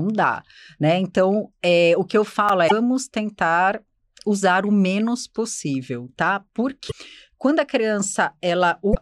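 The speech arrives in chunks about 4 s long, and a gap is left between chunks at each join: about 7 ms of silence at 2.49 s, just after "é o que eu", and again at 6.49 s after "o menos possível tá". Each gap is a tiny hard-edged hole.

Damaged data in the compressed stream makes the decoder lose sync and hunt for the next frame at 2.66–2.72 s, just before "tentar usar o menos", at 6.87–6.93 s, and at 8.91–8.97 s. Each is a brief glitch of roughly 55 ms.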